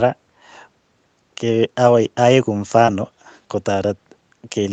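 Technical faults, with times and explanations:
2.85–2.89 s, short concealed packet loss: 20 ms of audio arrived too late, so the decoder stretched the preceding sound across the hole, leaving a quick smear.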